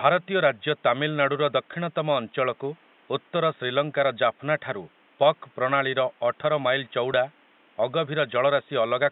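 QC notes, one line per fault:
7.13 s, lost LE Audio frames: a 10 ms gap, pointing to one dropped LC3 frame, refilled with the previous spectrum under random signs, so a brief noisy smear replaces detail. Spectrogram shows a thin vertical slice with harmonics blurred; waveform shows noise-like texture.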